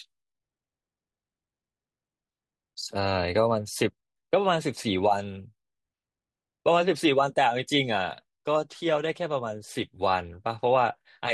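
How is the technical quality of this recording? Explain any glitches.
The recording has one audible glitch: a brief dropout from lost LE Audio frames at 0.40 s in the speech. For about 15 ms, which fits two consecutive frames going missing on the Bluetooth LE Audio link, the LC3 decoder had no data and concealed the gap by replaying the last good spectrum with randomised signs. The result is a short noisy smear before normal decoding resumes.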